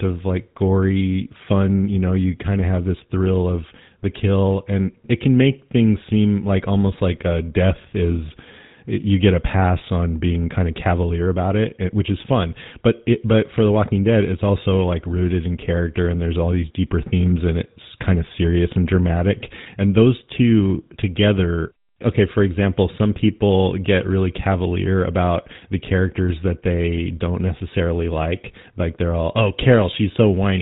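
GSM full-rate codec throughout: a vocal-tract model driven by sparse, regular pulses rebuilds the speech, leaving plainly audible buzzy roughness and nothing above 3.8 kHz.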